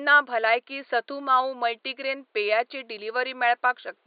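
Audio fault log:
Nothing stood out on listening to this speech recording, with only a faint room noise sitting about 49 dB below the speech.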